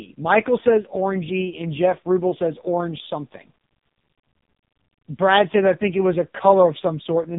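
From start to finish the speech carries the AMR narrowband mobile codec. Nothing above about 3.7 kHz survives, so sibilants lose their edge and the sound is boxed into a phone-line band. The damage is heavy: the codec rebuilds each 20 ms frame from a vocal-tract filter excited by only a few pulses, and at this starved rate the result is buzzy, synthetic and metallic, which fits AMR-NB's lowest 4.75 kbps mode.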